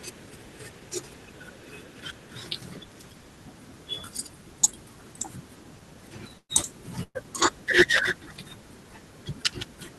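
At 6.37 s and again at 7.03 s, a burst of packet loss removes about 120 ms of speech. The receiver stretches the last sound into a fading buzz or hiss before a brief silence, unlike a plain dropout, which cuts straight to nothing.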